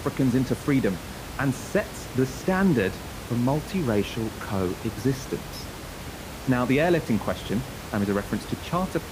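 A speech recording with no technical fault to report. Room noise sits about 12 dB below the speech and belongs to the recording itself.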